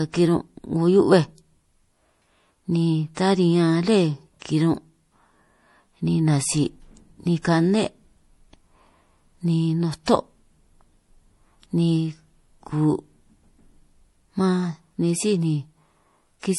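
From start to finish the speech sounds dull and swirly: nothing reaches above about 11.5 kHz, so the top octave is missing, and the artefacts of heavy perceptual coding remain. This is low-bitrate audio saved at a high bitrate. The band limit and artefacts fit an MP3 encoded at around 48 kbit/s that was likely re-encoded as a much larger MP3, perhaps near 256 kbit/s, which preserved the damage without restoring anything.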